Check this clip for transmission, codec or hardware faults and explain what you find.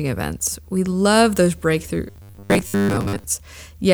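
One fault stands out: robotic sound from repeated short buffers, from 2.08 to 3.24 s. The speech becomes a rigid, metallic buzz pinned at 100 Hz, which fits roughly 10 ms segments being looped for most of that stretch, likely because audio arrived too seldom. Unlike plain dropouts, the sound never goes silent and still loosely tracks the speech.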